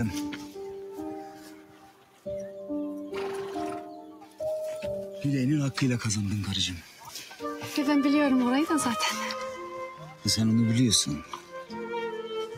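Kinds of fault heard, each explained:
Noise suppressor applied to music or sounds: Throughout, the level pumps and thins, with steadier parts of the sound sinking and recovering across a swing of roughly 10 dB, while sharper onsets hold their level better. The cause is a speech-tuned noise suppressor left active on non-speech material. It judges sustained, even content to be background noise and keeps pulling it down, so the gain moves unevenly from moment to moment.
Sound cut by the noise suppressor: Five distinct dips occur where the sound sags below its surroundings: 0.77 to 2.26 s (about 11 dB down), 4.0 to 4.4 s (about 8 dB), 6.87 to 7.06 s (about 6 dB), 9.93 to 10.25 s (about 11 dB) and 11.23 to 11.72 s (about 10 dB). In each stretch the suppressor took the material for noise and cut it harder than the rest.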